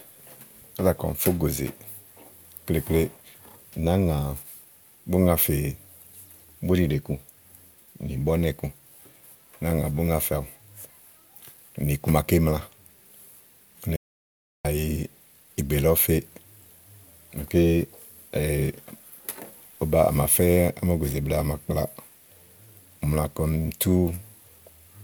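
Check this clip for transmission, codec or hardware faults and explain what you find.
One fault stands out. From 13.96 s to 14.65 s the speech cuts to silence, about 0.68 s with no room tone, an audio dropout to silence, likely from input lost while zeros kept being recorded.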